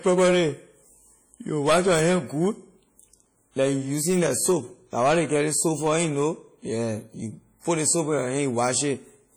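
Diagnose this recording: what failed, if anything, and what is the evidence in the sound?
WMA compression throughout the speech, codec stage: heavy ringing, washy smear and signal-following hiss, likely a transform encoder around 32 kbps zeroing weak components.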